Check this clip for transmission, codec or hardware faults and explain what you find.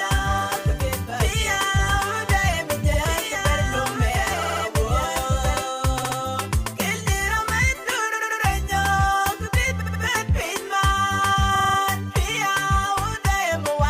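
Two faults are present: a doubled audio track over the first part of the clip, and repeated frames recurring throughout.

Doubled audio track, from the start to 5.62 s: a full-band copy of the sound, about 5 dB quieter, trails roughly two seconds behind, then cuts off abruptly. It has no decay or room colouring, unlike an echo. The likely cause is a second, slower capture path being mixed in.

Repeated frames: at 2.93 s a 69.7 ms block plays once more. At 4.41 s and 9.80 s a 69.7 ms block plays three extra times. At 6.02 s a 69.7 ms block plays twice more. At 8.13 s a 92.9 ms block plays three extra times, and at 11.54 s a 46.4 ms block plays five extra times. Each one is a stutter. Unlike a dropout, nothing is lost: the audio becomes longer by the repeated time.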